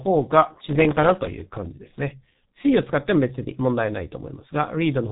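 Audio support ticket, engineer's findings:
G.723.1 codec damage throughout. Speech muffled and hoarse, nothing above 3.8 kHz. Consonants blurred by slow 30 ms frame updates, consistent with a roughly 6 kbit/s stream.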